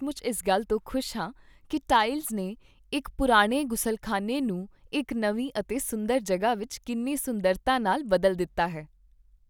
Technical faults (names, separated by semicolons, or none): none